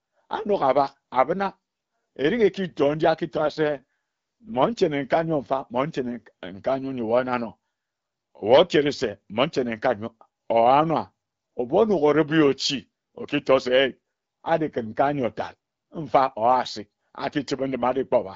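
Speech over an AMR wideband (HD Voice) call shows an AMR rate drop from 3.35 to 4.78 s, between "erik ekitor nji" and "nkae nyor mfa mmon". The voice turns rough and raspy, consistent with the codec falling from 12.65 to 6.6 kbit/s. Unlike a bandwidth switch or a dropout, the band stays the same and there is no gap.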